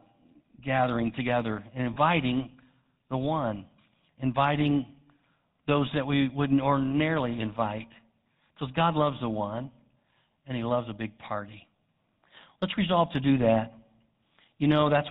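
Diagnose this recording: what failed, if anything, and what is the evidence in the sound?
The codec stage is at fault for the whole recording. The speech has the buzzy, gravelly roughness of the GSM full-rate codec, plainly audible throughout, with nothing above 4 kHz. That fits a 13 kbps full-rate coder, which drives a vocal-tract model with a sparse, regularly spaced pulse excitation. A plain 4 kHz low-pass or narrowband resampling would sound dull but clean. The grainy buzz riding on the voice is what points to this codec.

The second fault is lost GSM frames, heard in the network or transmission path. There is a brief rough, metallic ring from 1.94 to 1.97 s, right after "gathering together and", and another at 11.76 s, after "loves a big party". Each fits one lost 20 ms frame. The decoder repeated the last good frame's settings, so the sound is smeared into a ring. A packet-loss dropout or clean splice would leave a silent gap or a click instead.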